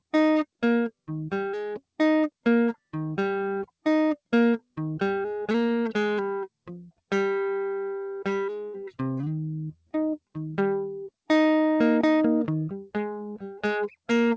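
No technical faults can be heard in this music, which has come through a call path whose content stops at about 8 kHz, consistent with a wideband codec such as G.722.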